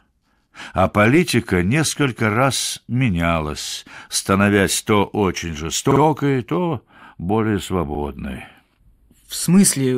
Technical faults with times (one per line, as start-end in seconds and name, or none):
5.91-6.00 repeated frames
6.56-9.24 channel delay (comb filtering)
7.95-7.99 repeated frames